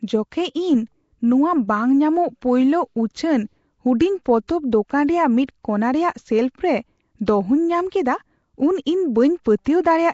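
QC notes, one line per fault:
Throughout, Nellymoser compression: the speech has a rough, hissy halo and a smeared, underwater feel, with nothing above about 7.7 kHz. That's likely Nellymoser Asao, the old Flash mic codec, starving weak bands of bits and filling them with noise, which fits a rate around 32 kbps.
9.65 s, pre-echo: a short hiss, about 15 ms long, smears in just ahead of a sharp attack, softening its edge. The codec spreads quantisation noise across the whole block, so noise sized for the loud onset leaks into the quiet moment before it.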